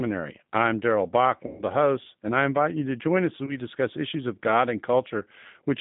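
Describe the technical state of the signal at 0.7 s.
At 0.7 s the speech carries G.729 codec damage, present throughout the clip. The coder resynthesises speech from a vocal tract filter, pitch predictor and sparse pulses, which fits an 8 kbit/s stream. The band sits between about 150 Hz and 3.7 kHz, and the texture sounds rough and synthetic.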